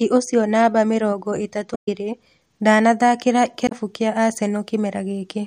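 At 1.71 s the speech breaks up until 1.88 s, and the same thing happens again, more briefly, from 3.65 to 3.72 s. Both are damaged data in a compressed stream: some of the encoded bytes were wrong, so the decoder misread those frames, lost its place and had to hunt for the next valid frame header before it could resume. Each time, that comes through as a chirp, squawk, click or short hole in the speech.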